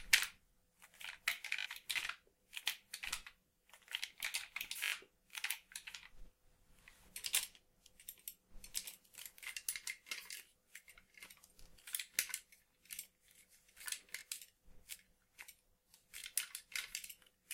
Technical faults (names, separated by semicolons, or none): repeated buffer